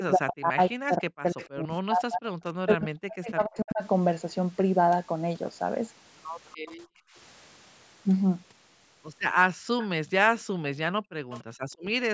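From the start to 3.82 s the speech is suppressed in double talk, in total around three seconds of it. The level sinks by something like 40 dB at its deepest and parts drop out in fragments, most likely because an echo canceller heard the far side talking at the same time and turned the near talker down along with the echo. On a waveform the envelope pinches to almost nothing in patches. A spectrogram shows the speech bands fading or breaking up, with the upper harmonics going first.

Inside that stretch, at 1.37 to 1.47 s, comes the first echo leak: a faint copy of the speech trailing 291 ms behind, roughly 20 dB under the main level. It is likely caused by a loudspeaker-phone canceller that didn't remove everything its microphone picked up. More leaks with the same 291 ms delay follow at 6.49 to 6.74 s (weaker, around 30 dB down), 9.82 to 10.42 s and 11.30 to 11.44 s (both about 20 dB down). 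On a spectrogram they look like pale duplicates of earlier speech patterns, shifted right by that fixed delay.

The background is gated by the echo canceller at 6.85 to 7.15 s, 9.55 to 9.67 s and 10.91 to 11.95 s. The room sound drops by about 29, 33 and 40 dB respectively, then returns once the canceller releases. The room tone briefly vanishes to near silence. A waveform shows the noise floor collapsing to a flat line, and a spectrogram shows a vertical gap across the whole band, which tops out at 8 kHz.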